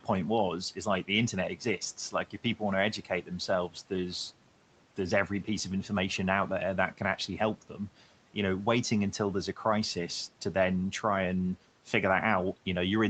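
A speech clip in which the noise suppressor cut speech twice, at 2.11–2.61 s and 3.05–3.31 s. The suppressor mistook parts of the voice for background and pulled them down by about 12 dB and about 11 dB, so short stretches sound swallowed. On a waveform these show as brief dips in the envelope, and on a spectrogram as faded patches in the speech energy, affecting roughly 0.3 s in total. Above these, the spectrogram shows nothing over 8 kHz, consistent with a call path through Opus.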